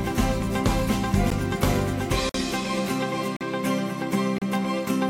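Four short hard-edged dropouts to silence cut into the sound at 1.30 s, 2.29–2.35 s, 3.37–3.41 s and 4.38–4.42 s, about one per second. That's a gap between stream segments: the player pads mismatched segment timestamps with silence, roughly 14 to 50 ms each, nothing actually lost.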